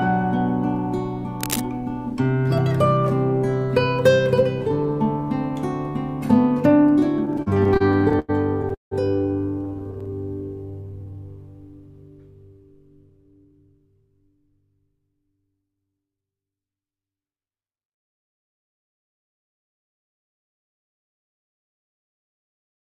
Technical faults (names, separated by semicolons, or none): cable scratch noise; repeated stalls (stutter); jitter buffer slow-down